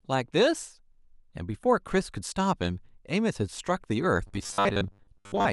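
Robotic sound from repeated short buffers runs from 4.27 s to 5.52 s, near the end of the speech. The likely cause is audio arriving too seldom, so the playback fills the gaps by looping the last fragment, with roughly half the material repeated rather than new. The loops impose a steady 100 Hz buzz, which fits a 10 ms buffer, turning the speech into a rigid, metallic drone that only loosely tracks the original phrasing.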